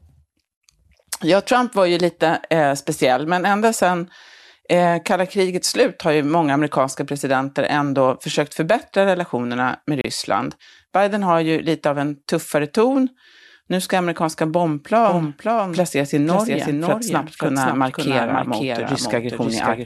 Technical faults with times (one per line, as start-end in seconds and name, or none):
10.01-10.04 gap at a join of encoded pieces
15.08-19.85 doubled audio track